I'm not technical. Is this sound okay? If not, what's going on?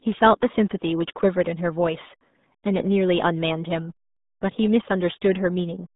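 No. From start to finish, the speech has the sound of a RealAudio 14.4 codec, an early internet audio format built for dial-up modems. It keeps only a narrow slice of the sound, roughly from 150 Hz up to 3.7 kHz, so everything sounds muffled. Because the format squeezes the audio very hard, the voice also takes on a gargly, bubbling quality. That gargling is what sets it apart from an ordinary telephone line, which is muffled but stays clean.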